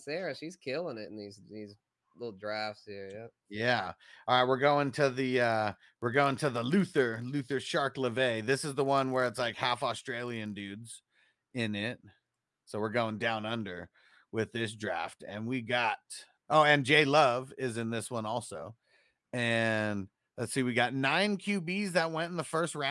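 From 5.02 to 10.76 s this speech clip carries a buzz at 50 Hz that rides along with the voice and falls away in the gaps. The fault is a resampler restarted on every block. Converting from 48 kHz to 24 kHz one 20 ms block at a time, the filter never saw the real neighbouring samples at each block boundary. It filled in wrong data there, leaving a small error at every edge that repeats fifty times a second.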